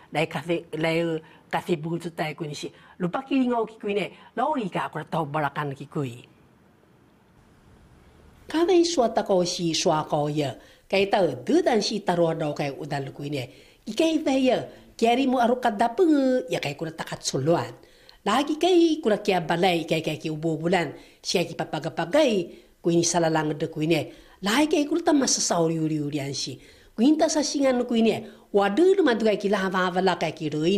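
From 1.60 to 4.94 s there is channel delay, or comb filtering. One channel runs around 10 ms late, and summing to mono cancels shared content at evenly spaced frequencies, starting near 40 Hz. The sound turns hollow and phasey.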